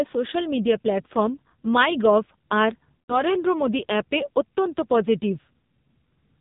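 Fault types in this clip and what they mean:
AMR narrowband mobile codec: throughout, this 8 kHz mobile codec removes everything above 4 kHz, and the heavy buzzy, synthetic texture fits a low bitrate near 5.9 kbps.
lost AMR speech frames: at 2.99 to 3.23 s, after "মাইগভ আর", the decoder stretches the last good sound with falling gain into a brief fade, about 100 ms, fitting five lost frames.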